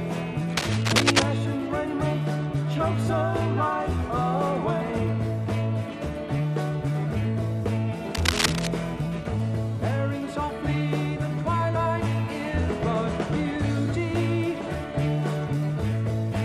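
Short bursts of scratchy, rustling noise, roughly as loud as the sound itself, cut in from 0.57 to 1.23 s and again from 8.15 to 8.67 s. This cable scratch noise likely comes from a worn cable or connector being moved, its contact resistance fluttering erratically.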